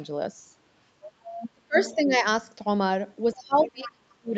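From 1.01 to 1.5 s a second, quieter voice sits about 15 dB under the speech. It returns from 1.78 to 2.01 s and again from 3.57 to 3.91 s. This is the other side's voice leaking through. The far end was likely playing on the talker's loudspeaker, and the echo canceller did not strip all of that from the microphone signal, so the call's own playback rides along underneath.

Between those scraps the speech itself sinks. From 1.53 to 1.78 s it drops by roughly 40 dB. A shallower dip of about 10 dB runs from 1.95 to 2.14 s. The longest dip lasts about a second, from 3.34 to 4.34 s, falling by roughly 35 dB while the leaked voice stays audible over part of it. This is speech suppressed in double talk. With both sides sounding at once, the canceller likely could not tell the local talker from the loudspeaker echo and pulled both down.

All of this sits within an 8 kHz band, as set by the call microphone processing and the Opus call path.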